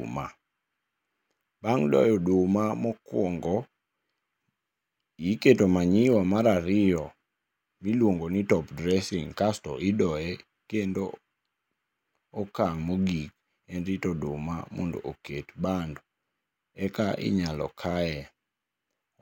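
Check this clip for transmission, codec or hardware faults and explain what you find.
No transmission, codec or hardware faults are audible anywhere in this speech recording.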